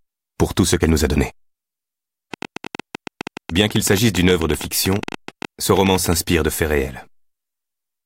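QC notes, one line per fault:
2.34–6.14 s, train of clicks: about forty near-identical pulses at roughly 11.3 per second, unevenly spaced, peaking around 10 dB above the sound and ticking through pauses too. Their repeated shape distinguishes them from random crackle, likely interference or an interface fault.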